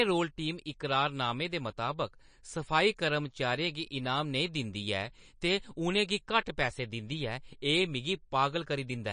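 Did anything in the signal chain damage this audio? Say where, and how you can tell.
Yes. The damage likely comes from MP3 compression at the codec stage, and it runs through the whole speech clip. Nothing is present above 9.8 kHz. Weak detail flickers in and out, giving a watery swirl, and s sounds chirp metallically. That fits a starved bitrate near 37 kbps.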